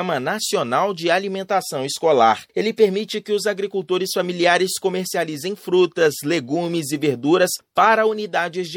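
Throughout the audio the top end is dulled and washy, with a swirling, watery quality and chirpy metallic edges on bright, hissy sounds, while sharp attacks come out smeared rather than crisp. This is plainly audible MP3 compression, most likely at a low bitrate, and the damage fits an encoder running short of bits around 64 kbps. To save data it has cut off the treble above a fixed frequency and thrown away quieter frequency components. Those components drop in and out from one short block to the next, and that flickering is what produces the swirl and the chirps. At 2.95 s there is also a brief blip, a squeak of misplaced energy peaking around -25 dBFS. This is a corrupt frame decoded: a compressed frame arrived with damaged bits and the decoder played it anyway. Its misread values scattered sound to the wrong frequencies for roughly the length of that single frame.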